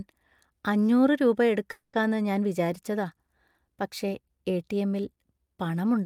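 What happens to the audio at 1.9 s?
A call audio freeze runs from 1.71 to 1.95 s, right after "അഞ്ഞൂറ് രൂപ". Packets were likely held up and the jitter buffer ran dry, so the last sound stretches into a fading buzz for 220 ms. "ഞാൻ വിചാരിച്ചതാ" then resumes intact, 220 ms late.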